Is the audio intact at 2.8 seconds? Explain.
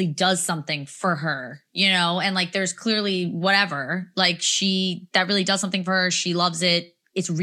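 Yes, the audio is intact at 2.8 seconds, with no fault to be heard at that point in the speech.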